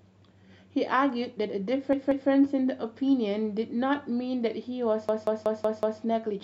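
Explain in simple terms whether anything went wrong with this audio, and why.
Two stutters come from repeated frames. Around 1.93 to 2.30 s, a 0.19 s slice of speech plays twice more. From 5.09 to 6.02 s, it repeats five more times. The slice fits a pair of compressed frames sent again, adding 0.37 s and 0.93 s.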